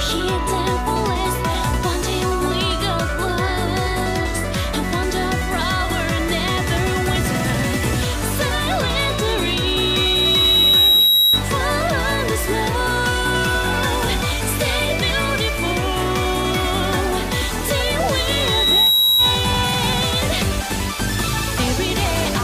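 At 9.01 s a loudspeaker feedback squeal begins. A single 3.8 kHz tone swells over about two seconds, rising a few dB above the sound, and stops at 11.45 s. The loop gain exceeded one at that frequency. It returns from 18.17 to 19.56 s, building faster.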